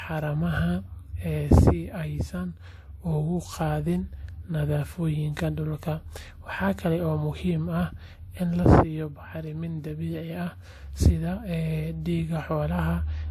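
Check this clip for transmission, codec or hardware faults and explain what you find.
The clip carries one codec fault, present throughout the speech: transcoding between lossy codecs. Nothing reaches above 14 kHz, and two distinct sets of coding artefacts sit on top of each other. The final encode points to AAC-LC at around 64 kbit/s, and the earlier layer fits WMA at around 96 kbit/s, so a likely chain is WMA into AAC. The second encoder spent bits reproducing the first encoder's artefacts and then added its own, which leaves both sets of artefacts heard together in a way that neither codec alone would produce.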